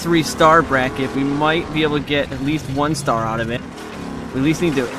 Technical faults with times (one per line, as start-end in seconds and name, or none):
2.30 compressed frames skipped
3.55-3.57 compressed frames skipped